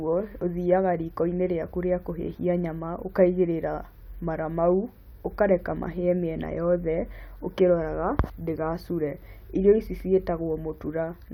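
Listening to the speech here, nothing technical stood out at any point.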